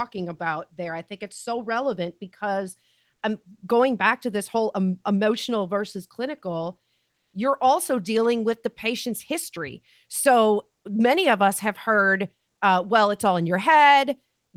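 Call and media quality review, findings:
Comfort noise in place of the background, 7.11–7.33 s, right after "um emotional versus clinical": sender likely in discontinuous transmission (fits Opus DTX), receiver synthesising noise. Real background, about 57 dB below peaks, becomes flat, featureless hiss for 220 ms; level shifts about 1 dB.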